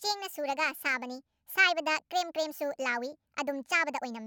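Throughout, the speech plays 1.5 times too fast and 7.02 semitones too high, sounding hurried and squeaky. This is a wrong sample rate, consistent with 32 kHz audio played at 48 kHz. A spectrogram shows harmonics and formants shifted upward and syllables squeezed in time.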